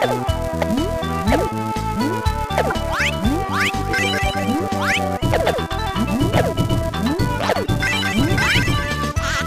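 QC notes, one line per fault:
throughout: filter restarted on every block. A steady 375 Hz buzz rises and falls with level as the filter resets each block, which fits a 128-sample block.
2.66 s, 4.15 s, 7.64 s: corrupt frame decoded. Brief squeaky bursts of 30 to 60 ms, where damaged frames are decoded with misread codes that scatter energy.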